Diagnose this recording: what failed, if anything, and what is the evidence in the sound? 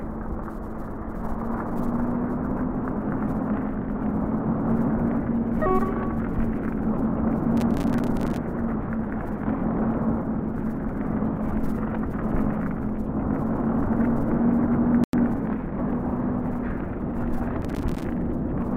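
At the driver or buffer stage, the processor fell behind and missed dozens of deadlines for short buffers of a few milliseconds each. Every miss left a hard-edged slot of silence, heard as a burst of gritty processor overload crackle from 7.57 to 8.37 s and again from 17.62 to 18.04 s.

At 15.04 s the sound drops to silence for about 94 ms, then resumes. This is likely a Bluetooth stall on the wireless link: delayed packets let the headphone buffer run dry, and playback paused until they arrived.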